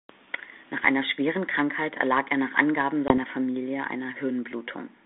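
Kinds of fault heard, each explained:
Packet loss on an ADPCM call: at 3.08 s a hard-edged 20 ms gap opens, and speech returns slightly distorted, settling by 3.18 s. About one lost packet knocked the decoder's adaptive predictor and step size out of step.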